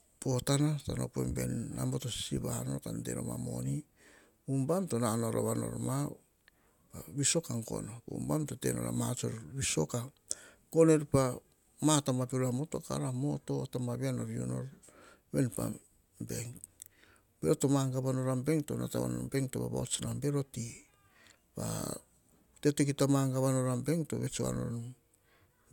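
A speech recording, and nothing technically wrong with it can be heard.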